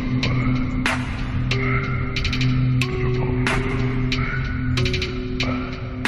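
Right near the end, at about 5.07 s, there's a quick glitch that's damaged data in a compressed stream: a short chirp or blip lasting under 20 ms that cuts across the sound. What's going on is that part of the encoded stream got corrupted, so the decoder couldn't make sense of the frames there, lost its sync, and spat out garbage for a moment before locking back onto the next good frame header.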